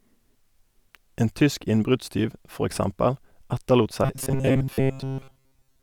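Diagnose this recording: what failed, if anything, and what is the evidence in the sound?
The driver buffer likely starved and looped a 7.5 ms block, causing robotic sound from repeated short buffers from 4.04 s to the end: a 134 Hz buzz.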